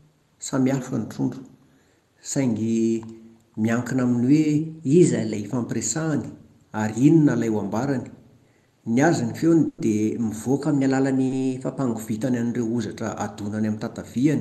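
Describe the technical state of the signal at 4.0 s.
At 4.0 s the speech is intact, with no fault present; what can be heard there is simply the ordinary character of the call path it travelled through.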